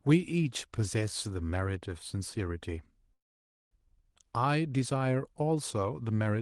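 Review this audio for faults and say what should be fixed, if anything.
There's a call audio freeze from 3.13 to 3.73 s: the speech stalls, a short fading tail gives way to about half a second of near silence, then it picks up right where it stopped, so nothing's lost, just pushed about 0.58 s late. That's likely packets held up until the jitter buffer ran dry. To prevent it, steady the network path or give the jitter buffer a bit more headroom so brief delivery stalls don't drain it.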